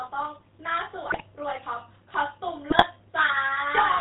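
From the start, the whole clip carries the buzzy, gravelly roughness of the GSM full-rate codec, which fits the old 13 kbps full-rate coder. The vocal tract is modelled with a filter driven by a sparse, regularly spaced pulse excitation, so the natural breathiness is replaced by a grainy rasp. On a spectrogram, everything stops sharply at 4 kHz, and harmonics below that look smeared and coarse rather than cleanly striated.

The first burst of GSM bit errors runs from 1.08 to 1.21 s, and a second from 2.70 to 2.85 s. Corrupted filter, pitch and gain parameters reach the decoder, so a handful of consecutive 20 ms frames come out wrong, and the sound breaks into squawks, pops and gargling. The waveform shows abrupt level jumps at frame boundaries. The spectrogram shows vertical blocks of misplaced energy where formants suddenly bend or flare.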